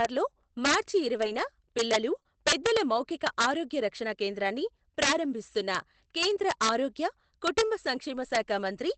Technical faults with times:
0.00-8.98 integer overflow
1.17-1.43 lost packet rebuilt from error correction
2.15-2.17 lost packet rebuilt from error correction
2.19-2.27 short concealed packet loss
2.97-2.99 lost packet rebuilt from error correction
7.95 lost packet rebuilt from error correction

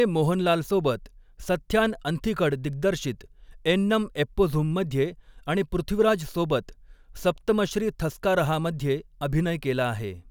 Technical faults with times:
none

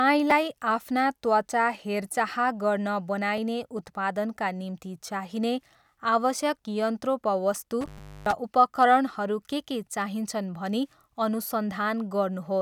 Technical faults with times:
0.30 repeated buffer
3.38 repeated buffer
7.81-8.33 intermittent contact
7.98 repeated buffer

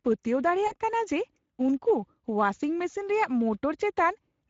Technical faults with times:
0.00-4.50 Speex codec
0.67-0.74 VoIP packet loss concealed by the speech codec

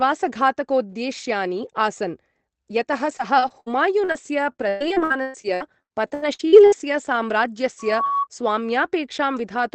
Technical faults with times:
3.17-4.16 repeated packet loss (robotic sound)
4.52-7.18 repeated packet loss (robotic sound)
7.79-8.27 loudspeaker feedback squeal

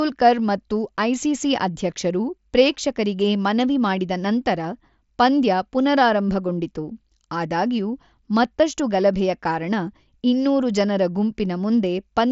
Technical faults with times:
none

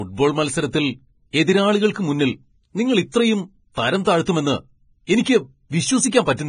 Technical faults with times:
0.00-6.48 Vorbis compression
5.06 pre-echo

